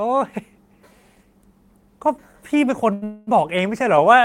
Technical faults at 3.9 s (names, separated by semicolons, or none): none